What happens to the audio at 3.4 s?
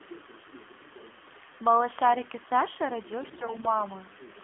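Around 3.4 s the speech falls inside a burst of AMR bit errors lasting from 3.20 to 3.69 s. Corrupted, weakly protected codec bits misplace excitation pulses, so the voice turns hoarse and gargly while the spectrogram shows smeared, ragged harmonics at a steady level. Throughout, the AMR narrowband mobile codec, which fits a 7.4 kbps mode, cuts everything above about 3.4 kHz, leaving an empty upper spectrogram and a buzzy, synthetic tone.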